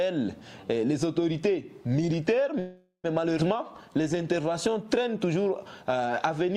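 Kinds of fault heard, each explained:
call audio freeze: from 2.59 to 3.06 s the audio stops moving forward and the last sound is carried on as a fading buzz or hiss for about 0.44 s, ending in roughly 100 ms of silence. Then playback resumes exactly where it halted. The likely cause is packets held up in transit, so the jitter buffer ran dry and the receiver filled the wait. Nothing is lost, but the audio now runs about 0.44 s later than before.
skip ahead: at 3.38 to 3.40 s the audio jumps forward, with only a few milliseconds of fill at the join. Roughly 150 ms of material is missing, and the two sides meet almost directly. This happens when the receiver drops a stretch while later audio is already queued, which takes back part of the delay built up by the freeze and shortens the lag by around a sixth of a second.
jitter buffer slow-down: from 3.57 to 4.84 s the audio plays at about 90% speed with its pitch unchanged, so sounds seem drawn out. 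The receiver is repeating single pitch periods and small slices of pauses again and again to rebuild its reserve of buffered audio. Across this 1.27 s stretch that adds 132 ms of extra material, pushing the playback delay back up.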